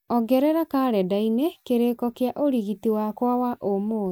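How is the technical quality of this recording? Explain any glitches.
The technical quality of the recording is sound, with no glitches to explain.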